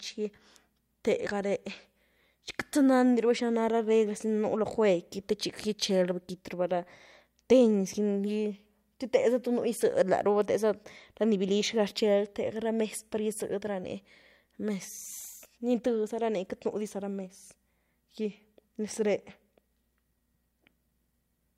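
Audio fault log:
Nothing to log here; the speech comes through without any technical faults standing out.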